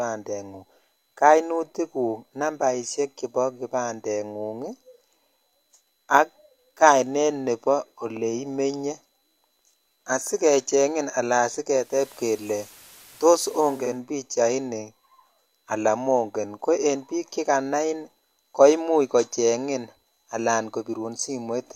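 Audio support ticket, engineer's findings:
11.70–14.03 s: digital radio blending to analogue. Receiver lost digital, cross-faded over 360 ms to the station's FM feed, then back. Hiss rises, roughly 25 dB under the speech. Level unchanged.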